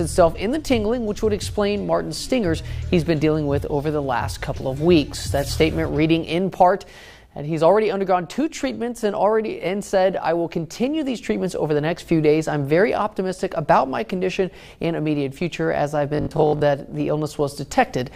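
From 16.15 to 16.63 s the sound goes robotic, with a rigid, metallic buzz at 50 Hz only loosely tracking what it replaces. That's the classic robotic sound from repeated short buffers. The likely story is that audio arrived too seldom, so the playback side kept looping its last chunk, about 20 ms given the 50 Hz rate, while the real audio was skipped. Roughly half of that stretch is repeated material.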